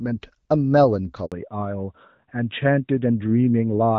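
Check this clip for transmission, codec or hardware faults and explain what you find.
Two faults appear, both tied to a network switch mid-call.

Handover gap, 1.26 to 1.32 s: the call was passed between networks and no speech frames arrived for 60 ms. The sound dies away within a few tens of milliseconds, leaving a brief hole of silence, and whatever was spoken in that window is simply missing.

Fallback to narrowband, from 1.32 s to the end: after the handover the link dropped from HD Voice to a narrowband codec, which fits a move from AMR-WB at around 12.65 kbit/s to AMR-NB at 12.2 kbit/s. Nothing above 4 kHz survives, so the speech turns duller, muffled and rougher.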